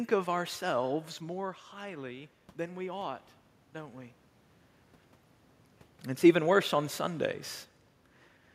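After "of ourselves", from 1.21 to 4.22 s, voice and room noise swell together by about 4 dB. This is automatic gain rising after the input fell about 13 dB.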